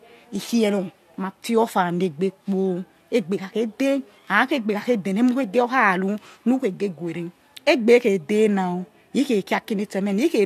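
No technical faults are audible anywhere in the speech recording.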